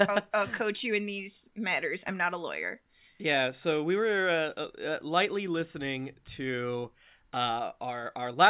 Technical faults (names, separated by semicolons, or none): none